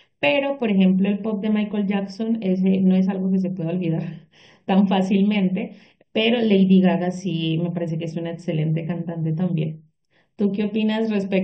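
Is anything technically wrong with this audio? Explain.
Yes, there's channel delay (comb filtering) throughout. One channel lags the other by roughly 0.4 ms, so the mono sum cancels at evenly spaced notches from around 1.5 kHz, leaving the speech hollow and phasey.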